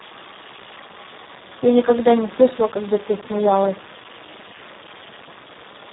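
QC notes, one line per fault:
Throughout: Speex codec. The speech sounds hoarse, buzzy and grainy, edging toward a robotic quality, with nothing audible above about 3.8 kHz, so it comes across dull and boxed-in. This is heavy damage from a CELP speech codec running at a very low rate, consistent with roughly 4 kbps, where too few bits remain to model the excitation faithfully, and the upper band is missing entirely.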